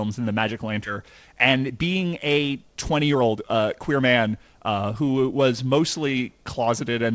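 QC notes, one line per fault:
0.86–0.88 s, skip ahead: about a second of speech is dropped and the two sides join directly, with no silence or fill, unlike a dropout gap.
1.02–5.36 s, jitter buffer speed-up: speech runs about 14% faster at unchanged pitch as short pitch-period pieces are removed, roughly 0.7 s in total, unlike resampling, which would raise the pitch.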